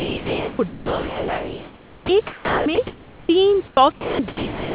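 Speech is replaced by steady, featureless hiss at 0.00–0.59, 0.68–2.09, 2.27–2.66, 2.75–2.78, 3.68–3.77, 3.92–4.19 and 4.28–4.74 s. The longest of these erases about 0.73 s of speech. This is sound dropped by the voice detector: it likely misjudged quiet speech as background and stopped sending, so the receiver filled the gaps with comfort noise. Between 2.87 and 3.29 s the room's background, about 26 dB below the loudest speech, turns smooth and uniform, changing level by only about 1 dB. This is comfort noise in place of the background, likely synthesised by the receiver during a transmission pause. Throughout, the narrowband call codec leaves nothing above 4 kHz.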